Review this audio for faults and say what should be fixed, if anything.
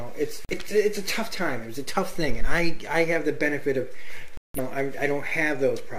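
Digital broadcast dropouts at 0.45–0.54 s and 4.37–4.60 s: lost signal or corrupted frames made the receiver mute, showing as flat waveform and blank full-band spectrogram strips. Stronger reception or more robust error protection on the broadcast link would prevent these mutes.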